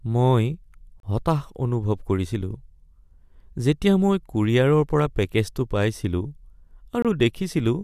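Twice the time stamps of consecutive stream segments fail to meet, leaving a gap between stream segments that the player fills with silence, once at 1.00 s and again at 7.02 s, roughly 6 s apart, which fits 6-second segments. The speech drops out abruptly with hard edges for about 34 ms and then about 25 ms, adding 32 ms and 24 ms of silence while nothing is lost, so the speech resumes intact.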